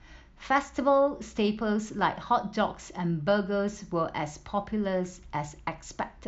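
No technical faults can be heard anywhere in this speech recording. There is nothing to place on the timeline and nothing to describe in order.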